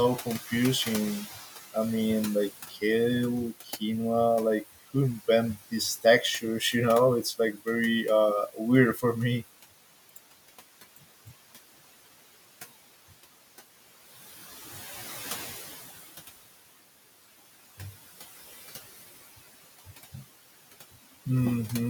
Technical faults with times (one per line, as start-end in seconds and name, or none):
0.00-21.89 noise suppressor artifacts
0.25-1.76 speech cut by the noise suppressor
2.69-2.83 speech cut by the noise suppressor
3.63-3.82 speech cut by the noise suppressor
5.71-7.67 speech cut by the noise suppressor
8.53-9.03 speech cut by the noise suppressor
10.96-11.32 speech cut by the noise suppressor